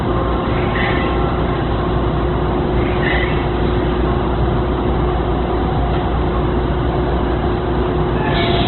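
From start to finish the sound carries heavy damage from what is likely Opus compression in its music mode. Nothing survives above 4.2 kHz, and band-filling noise turns tones rough and grainy, which points to a very low bitrate around 12 kbps.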